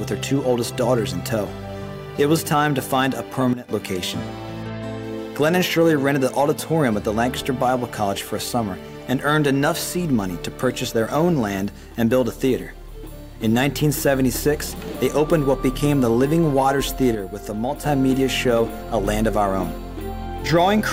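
At 3.53 to 3.69 s the level drops abruptly by about 12 dB, and again at 17.15 to 17.83 s by about 6 dB: a sudden gain jump, likely an unramped digital gain change.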